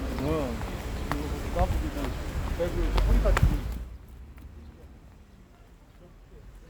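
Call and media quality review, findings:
No faults found in this clip.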